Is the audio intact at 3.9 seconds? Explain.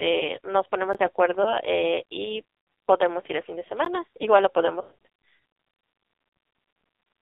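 No. A block of digital silence falls at 3.85 s: about 15 ms of samples are zeroed outright, with no fade in or out. The drop to zero and the return are equally abrupt, so it is heard as a brief tick-like hole in the speech.

The AMR narrowband mobile codec also applies here, as it does across the whole clip. The speech is carried at 5.9 kbps, squeezed into a line band of 300 Hz to 3.7 kHz. At that low bitrate the pulse-driven vocal-tract model leaves the voice heavily damaged, sounding buzzy, synthetic and muffled.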